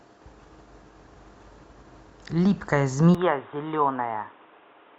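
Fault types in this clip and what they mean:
Input switched to a poorer device: at 3.15 s the speech turns abruptly dull and boxy with no gap, the likely cause being a change to a narrower-band microphone or headset profile. On a spectrogram, everything above 3.8 kHz vanishes from that point, and a new noise floor appears roughly 30 dB under the speech. The waveform envelope drops by about 5 dB at the switch and stays lower to the end.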